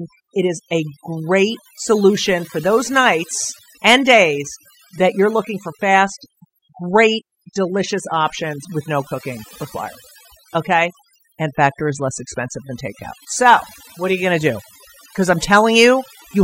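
Overdone noise removal runs through the whole speech clip: a noise reducer set too hard pulls individual frequency bands down whenever they sit near its noise estimate, taking quiet speech detail with them. Gaps fall to near silence dotted with twinkling specks. A spectrogram shows scattered isolated time-frequency dots in the pauses and ragged, hollowed-out harmonics.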